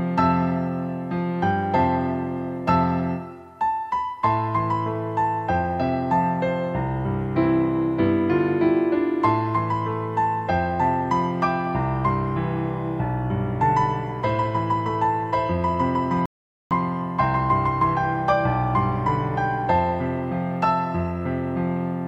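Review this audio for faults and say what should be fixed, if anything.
A rebuffering stall runs from 16.26 to 16.71 s. The player used up its downloaded audio and went silent for about 0.45 s, then resumed exactly where it stopped. Nothing is lost, but that time is added. A waveform shows a flat, silent gap, and a spectrogram shows a clean, fully blank column with matching content on both sides. To prevent it, hold a deeper playback buffer and adapt the bitrate so downloading stays ahead of playback.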